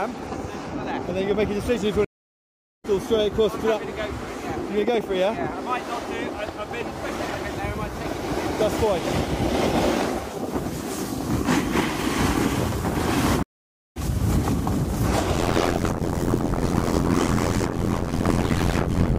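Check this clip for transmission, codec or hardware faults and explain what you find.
Two stream reconnects and an overlap-add ripple are present. From 2.05 to 2.86 s and from 13.43 to 13.98 s, the connection drops and the player restarts its decoder. Each gap is about 0.79 s and 0.53 s of silence, and playback resumes roughly 0.4 s further on, so material is skipped. The waveform shows a flat gap, and the spectrogram shows a blank column with a hard jump in content on either side.

From 15.35 s to the end, the frames are reassembled with an overlap that doesn't sum to constant gain, so the level dips about 60 dB once per frame, roughly 100 times a second. The result is a metallic buzz with extra tones around each note. The waveform's envelope is chopped into regular notches, and the spectrogram shows evenly spaced vertical stripes.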